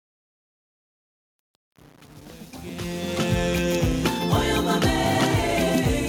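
The audio fades in and reaches full level at 3.42 s, and that fade has truncation distortion from 0 to 3.42 s, worst up to 3.26 s. The quiet stretch turns gritty because the fade stage drops low-level detail without dither, which fits only about 7 bits.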